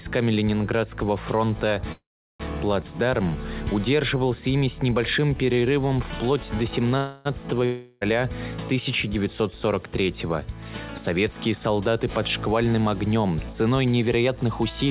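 The audio is band-limited to nothing above 4 kHz with the coding noise of a phone-grade call path, which fits G.711 mu-law at 64 kbps. A call audio freeze occurs from 1.92 to 2.42 s. The last sound is stretched as a fading buzz or hiss, then about 370 ms of silence follows. The audio resumes where it stopped, so nothing is lost. A second call audio freeze runs from 6.98 to 7.27 s. Here the held sound fills all 277 ms without reaching silence. Both freezes were likely caused by delayed packets leaving the jitter buffer empty. A long network dropout follows from 7.65 to 8.03 s. The last sound is carried on as a fading buzz or hiss for 360 ms, likely because packets never arrived. When the audio returns, that 360 ms is missing. From 12.67 to 14.88 s there is a jitter buffer speed-up. The audio runs at 108% speed with unchanged pitch and sounds hurried. The receiver cut short pitch-period pieces, about a fifth of a second in all, to reduce a buffer backlog.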